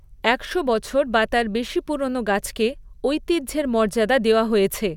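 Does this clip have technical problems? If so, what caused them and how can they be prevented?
No, there are no technical problems to report here.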